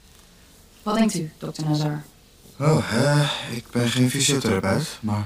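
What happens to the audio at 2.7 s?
At 2.7 s the sound is doubled, as it is throughout the clip. This is channel delay (doubling). One channel arrives 40 ms late, and the two are summed to mono. The late copy is heard at equal level as a distinct slap just behind the original.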